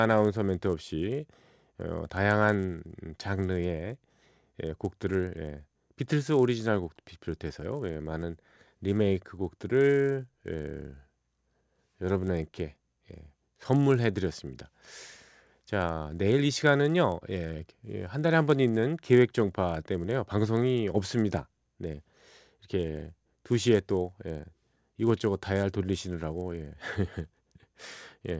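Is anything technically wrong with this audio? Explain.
Yes. Throughout the speech, the resampler restarted on every block. Each 10 ms block, consistent with a conversion from 24 kHz down to 16 kHz, was processed without seeing its neighbours, leaving a small error at every edge. That repeats 100 times a second, producing a buzz at 100 Hz that rides on the speech and is present only while there is signal.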